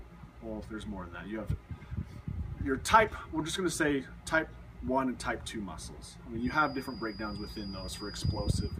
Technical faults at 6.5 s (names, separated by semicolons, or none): feedback whistle